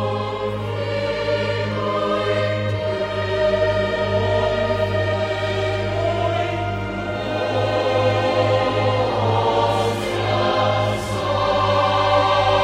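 No technical faults occur anywhere in the clip, so there is nothing to describe in time order.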